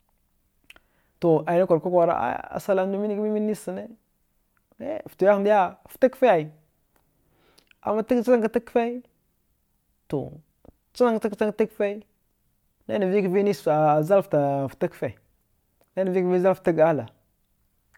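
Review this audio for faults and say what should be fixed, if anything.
Nothing in the speech signal calls for correction, as it holds steady and intact throughout with no audible defects to fix.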